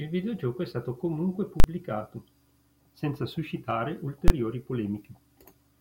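At 1.6 s and again at 4.28 s the speech hits invalid numbers at full scale: a calculation produced infinite or invalid values that got pinned to the largest positive or negative value. The output sits flat at one extreme value, far beyond the speech's peaks, for about 40 ms and 20 ms, so each one lands as a single sharp bang.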